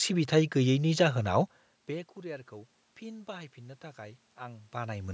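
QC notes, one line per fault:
1.87 to 5.09 s, automatic gain rising: The talker moves back around 1.5 s and the level at the microphone falls by about 20 dB. The gain control slowly lifts its gain by about 5 dB. Voice and room noise swell together.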